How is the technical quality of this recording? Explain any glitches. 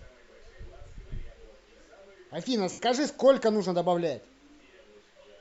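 The recording has one audible glitch, a short dropout partway through the speech.

Lost LE Audio frames, from 2.72 to 2.79 s: about 67.5 ms of the Bluetooth LE Audio stream never arrived, which fits nine 7.5 ms frames. The LC3 decoder filled the gap by repeating the last good spectrum with randomised signs and then fading it. The speech briefly turns into a hissy, smeared blur that sags in level before the signal returns.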